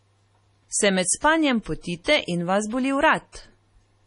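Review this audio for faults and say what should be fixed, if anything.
Throughout, the speech sounds watery and swirly with nothing above 10.6 kHz, likely from heavy MP3 compression, where a bitrate around 32 kbps leaves the encoder starved.

Just after "med spanjem", from 2.04 to 2.06 s, there's pre-echo: the codec spreads block noise backwards, giving a 25 ms hiss before "in vas boli".

To avoid both, go back to the original and export at a much higher bitrate or in a lossless format.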